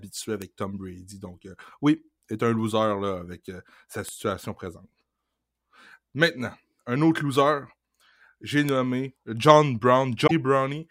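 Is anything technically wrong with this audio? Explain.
Yes, there are two kinds of trouble in this speech clip.

Bit error spikes land at 0.42, 4.09 and 8.69 s. Each is a single-sample tick: one flipped bit throws that sample's value off by a power of two before it snaps straight back. You hear a sharp, broadband click with no relation to the speech.

Near the end, from 10.26 to 10.31 s, the audio jumps ahead and there's a brief glitch lasting about two frames' worth, which fits 24 ms MP3 frames. The likely cause is a broken MP3 bit reservoir. Frames were cut out, so the next frame reached back for borrowed bits and decoded bytes that belonged to a different frame.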